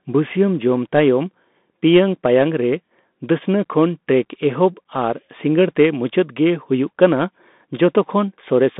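A Bluetooth CVSD headset codec runs through the whole speech clip. The signal is coded as a single up-or-down bit per sample with an adapting step size, which fits a 64 kbit/s CVSD stream. The band sits at roughly 200 Hz to 3.6 kHz, with nothing above 3.8 kHz. Sudden loud, bright moments outrun the step and distort, s sounds come out scratchy, and a granular hiss sits under the speech.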